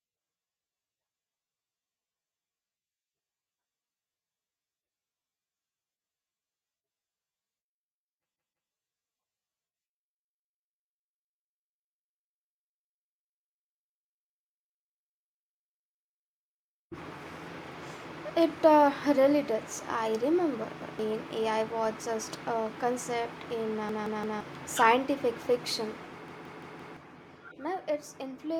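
At 8.36 s, 20.82 s, 23.89 s and 26.28 s the speech hits a repeated buffer: audio ran late, so playback looped the last block, a 171 ms slice that fits an 8192-sample buffer. It plays again twice, once, three times after "just a concept in", and four times after "scientific fiction", each join hard-edged. Whole identical chunks stutter, rather than leaving a silent gap like a dropout, and the speech resumes roughly 0.15 to 0.7 s further on.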